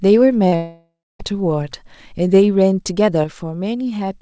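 Right near the start, at about 0.48 to 0.55 s, there's a short concealed packet loss. Roughly 40 ms of the speech never made it to the decoder in time, and the receiver papered over the gap by stretching the sound that came just before it, then blending back into the real audio. You hear a quick smear or wobble rather than a clean break, and if a brief consonant fell in that window, it's simply gone.

Straight after, from about 0.56 to 1.22 s, the audio most likely suffered a long network dropout. About 640 ms is missing. The receiver tries the same trick, carrying the last sound forward as a buzzy, fading tail, but it can't sustain that. The last 0.26 s or so of the gap is just silence before the speech picks up again further along, with that chunk never recovered.

Then, from 3.24 s to the end of the clip, the level drops abruptly by about 6 dB, which is most likely one channel dropping out. 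With one side of the stereo pair gone, the mono sum loses half of everything the two channels shared. Anything that lived only in the lost channel vanishes outright. Throughout, there's nothing above 8 kHz, consistent with a wideband call codec such as G.722 on the call path.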